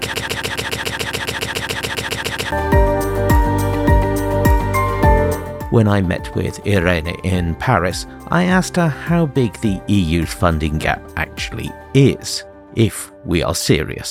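A broken-record loop runs from the very start of the clip, already under way at 0 s, until 2.52 s. A fragment about 139 ms long repeats exactly, back to back, about 17 times, producing a rapid, mechanical stutter at roughly seven cycles per second. The likely cause is a player, encoder or stream that stalled and kept resending the last piece it held. Whatever audio belonged in that stretch is lost.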